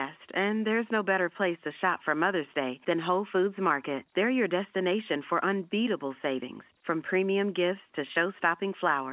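Nothing goes wrong anywhere in this speech recording; it just has the familiar narrow sound of A-law G.711 telephone coding, with nothing above 4 kHz and a faint noise floor that rises and falls with the level, as that format always gives.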